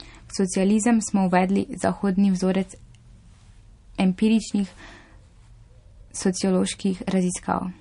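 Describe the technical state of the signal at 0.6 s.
MP3 compression damage is audible at 0.6 s and throughout the speech. The likely cause is an encoder short of bits, fitting about 40 kbps, that cuts everything above 10.6 kHz and drops weak frequency lines frame to frame, leaving a watery, swirly texture.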